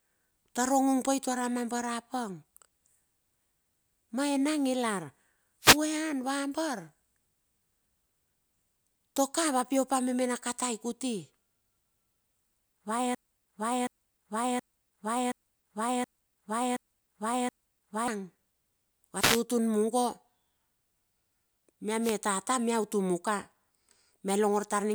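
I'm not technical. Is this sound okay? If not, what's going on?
No, there are two kinds of problem here. At 5.61 to 5.78 s, 19.14 to 19.44 s and 22.01 to 22.16 s you hear a wireless microphone noise hit: the radio link to the mic briefly weakens, so a quick burst of static cuts across the speech.

From 13.15 to 18.08 s there's a broken-record loop: a piece about 0.72 s long plays seven times in a row, likely because the playback or stream stalled, and whatever should have been said then is gone.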